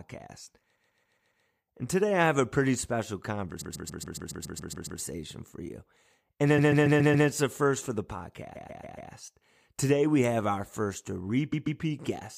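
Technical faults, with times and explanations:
0.75–1.44 s, 3.60–4.99 s (after "have a pretty special", before "for you"), 6.57–7.27 s, 8.55–9.10 s (after "a first for the"), 11.52–11.80 s (after "we have our first"): repeated frames. A 139 ms stretch of speech stutters, replaying two to ten extra times, because the same short run of compressed frames was decoded over again.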